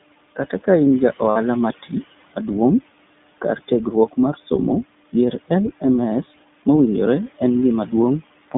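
From the start the speech passes through the iLBC codec, a narrowband VoIP coder that handles each short frame on its own, here in 20 ms steps consistent with its 15.2 kbps mode. The line passes only about 150 Hz to 3.6 kHz, so a spectrogram shows a hard ceiling with empty space above and thin energy at the very bottom. The coding damage is plainly audible as a rough, slightly synthetic edge. The room noise sits about 20 dB under the speech.

From 1.30 to 1.38 s, between "kain ja" and "mati maduong'", there are lost iLBC frames. The gap fits roughly three 20 ms frames. The decoder fills it by repeating the last pitch cycle with added noise, so the sound becomes a brief held, buzzy vowel. On a spectrogram this appears as flat, smeared harmonics, and the waveform shows a run of near-identical periods. Clean speech returns immediately afterward. At 7.60 to 7.62 s, just after "mowinjore en", a single frame is concealed the same way, producing a tiny buzzy blip.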